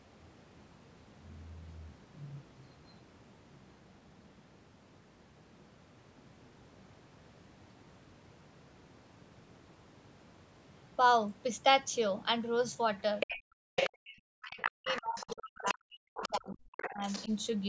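At 13.2 to 13.38 s a short burst of the other side's voice leaking through appears, only about 5 dB below the talker's speech. The other end is playing on the talker's loudspeaker, and the echo canceller has likely failed to strip that return from the microphone. A second scrap follows at 13.77 to 13.9 s at roughly the same level as the speech, then longer stretches at 14.42 to 15.74 s and 16.14 to 17.35 s, each around 10 dB down.

Overlapping those, from 13.65 to 17.31 s, the talker's own speech is suppressed in double talk. With both ends active, the canceller likely could not separate near speech from echo and attenuated everything. The talker's level drops in pieces, on the order of 40 dB at the deepest, over roughly 3 s in total, so parts of the speech fall away while the far side is heard underneath.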